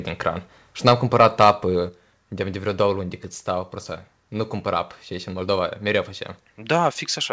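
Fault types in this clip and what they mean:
Microphone overload: The loudest peaks are flattened against the converter's ceiling, giving a harsh, crackly edge. This happens from 0.87 to 0.93 s, about 7 dB over, and from 1.2 to 1.51 s, about 5 dB over. Excessive input gain is the likely cause.
Microphone volume stepped down: The whole signal, background included, drops abruptly in one step. It falls about 2 dB at 0.89 s, inside the first distorted burst, and about 4 dB at 1.89 s. Automatic gain control reacting to clipping is the likely cause.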